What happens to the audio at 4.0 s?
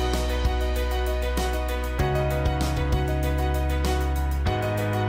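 Nothing goes wrong at 4.0 s; the audio plays through that moment intact, with no dropout, click or distortion.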